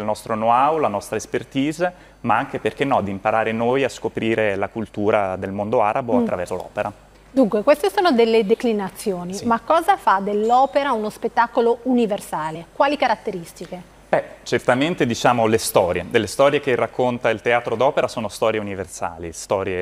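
Compressed frames are skipped three times, at 6.48 s, from 8.52 to 8.55 s, and at 12.54 s. The decoder drops whole 23.2 ms frames, so the audio leaps forward by about 70 ms, then about 50 ms twice, each join a short smeared blip.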